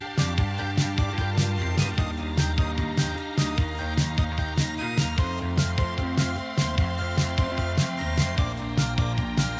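Nothing goes wrong anywhere in this music clip, and the only thing to notice is the call path itself, with nothing above about 8 kHz, which fits a wideband codec like G.722 at 64 kbps.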